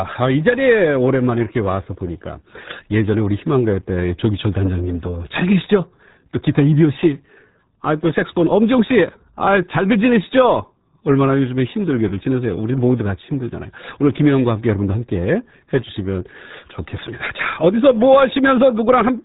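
From start to end the speech carries RealAudio 14.4 codec damage. Nothing passes above 3.8 kHz, and heavy low-rate coding, which fits roughly 8 kbit/s, leaves the speech muffled and gargly throughout.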